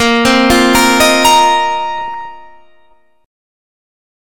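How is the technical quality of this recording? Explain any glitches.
The recording has two distinct faults, both in its first 2.3 s.

From the very start to about 1.53 s there is hard clipping. The signal is driven roughly 10 dB past what a stage in the chain can pass, so every peak is sliced flat. Those squared-off tops generate harmonics high up the spectrum, heard as a harsh, constant fuzz on loud material. It differs from codec distortion because it tracks level: the grit sits on the peaks and eases where the sound is quieter.

From about 1.99 to 2.25 s comes DAB burbling. Weak reception let a small fraction of a percent of bit errors slip past error correction into the MP2 stream, corrupting samples so that short blips of noise appear in single sub-bands, which fits about a dozen frames being hit. It sounds like bubbling, squelchy chirps laid over the audio. Unlike a packet-loss dropout, the sound never goes silent. 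It keeps playing with warbling colour on top.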